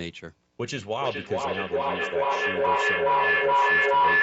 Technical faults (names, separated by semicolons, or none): feedback howl